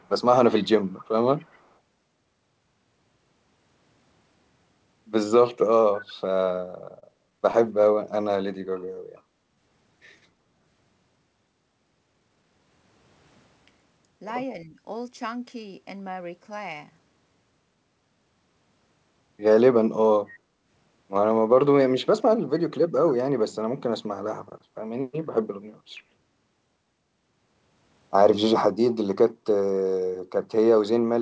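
From the first instant, an echo leak trails the speech: a delayed copy arriving 256 ms behind, heard at 0.0 to 0.09 s, 0.52 to 0.69 s, 0.87 to 1.06 s and 1.38 to 1.68 s. It is strongest around 0.52 s, roughly 20 dB below the speech, and weakest at the start and near 1.4 s, where it falls to roughly 35 to 40 dB down. The likely cause is a loudspeaker on one side whose echo canceller let part of its own playback back into the microphone.

Between 7.00 and 7.96 s the audio shows repeated stalls (stutter). Six times the jitter buffer ran dry and the receiver held the last sound until data arrived, filling 68 ms in total, the longest gap being 21 ms. Nothing is lost, but the speech hitches and drags across that second.

At 8.24 to 8.29 s a short stall from a late packet stretches one sound by 19 ms while the receiver waits, then resumes where it left off. The result is a brief held moment with a slight buzzy edge, and the playout delay grows by the same 19 ms.

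A jitter buffer slow-down follows from 8.58 to 9.86 s. The receiver repeats pitch periods to rebuild its reserve, adding 120 ms and running the speech at 91% speed. Pitch is unchanged, but the speech sounds drawn out. A milder slow-down occurs from 20.84 to 21.84 s, adding 63 ms at 95% speed.

From 14.64 to 14.79 s, speech suppressed in double talk causes a dip of roughly 5 dB lasting about 150 ms. The level briefly sags as if pulled back. The likely cause is an echo canceller that could not separate the talker from simultaneous far-end audio and attenuated both.

The opposite adjustment, a jitter buffer speed-up, runs from 24.05 to 24.90 s. With too much audio queued, the receiver cuts short pitch-period pieces, removing roughly 50 ms and playing at 105% speed. The pitch stays put, but the phrasing sounds slightly hurried.

At 29.34 to 29.45 s the background is gated by the echo canceller. 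While loudspeaker playback was active, the microphone was pulled down hard, by about 11 dB at the deepest point, for about 100 ms. The room tone drops out momentarily and snaps back when the canceller releases.

Throughout, the G.722 call path limits the audio to nothing above 8 kHz, giving a wideband-telephone top end.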